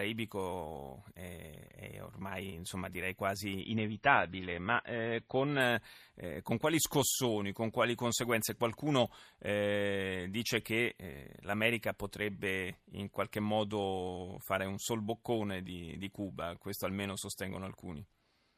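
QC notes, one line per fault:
3.61–5.61 s, adaptive stream at a lower bitrate: the stream switched down after "ormai insomma direi", consistent with a drop to a roughly 24 kbit/s MP3, cutting everything above 5.9 kHz, with an abrupt gapless return before "eh con quali scossoni".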